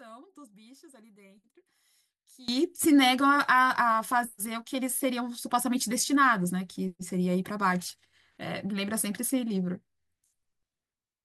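It's a speech clip, and for the first 2.48 s the sound drops by about 22 dB and goes faint, with the centre of the voice mostly gone. That's likely one channel inverted, so the two sides cancel when summed to mono.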